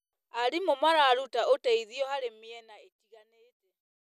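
Speech clip with no technical faults; the level eases down gradually from around 1.5 s to the end, as an edited fade-out would, with no click or hard edge.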